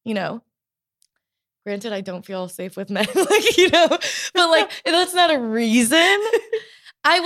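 Nothing in the speech stood out as a technical problem on listening.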